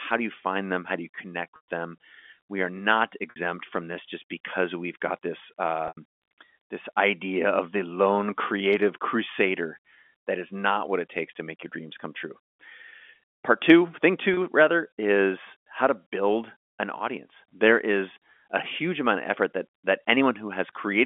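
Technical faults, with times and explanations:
1.56 to 14.37 s, packet loss with pitch repetition: packets dropped at 1.56–1.63 s (after "do you connect"), 3.30–3.36 s (between "are not" and "from this just because"), 5.88–5.97 s, and 14.34–14.37 s (between "two thing" and "rather is how to"). The losses are 120, 60, 90 and 30 ms, which fits 30 ms packets. The receiver loops the last pitch cycle over each gap and fades it, so the 30 ms gap sounds like a brief held buzz and the longer gaps fade into silence before the speech returns, inside the narrow telephone band.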